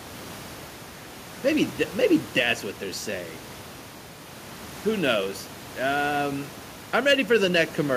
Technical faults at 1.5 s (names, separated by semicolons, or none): none